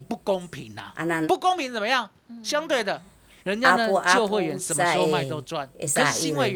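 No faults can be heard anywhere in the recording; nothing in the signal path calls for a note.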